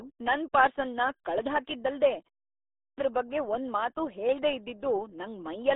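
The whole clip carries the sound of the RealAudio 14.4 codec. It runs at 8 kbit/s, a rate built for dial-up modems. Almost nothing sits outside roughly 300 Hz to 3.7 kHz, and there is no content above 3.8 kHz. At that bitrate the coder keeps only a coarse sketch of the voice. The damage is heavy. The speech sounds muffled and gargly.

At 2.55 s there is a clipped start after a pause. The silence before it lasts 0.33 s. During that gap the output device drops into sleep. It needs time to wake and lock again. That costs about 430 ms, up to 2.98 s. The audio cuts in abruptly, with its opening sounds gone, just before "ಬಗ್ಗೆ ಒಂದ್ಮಾತೂ ಹೇಳ್ದೇ".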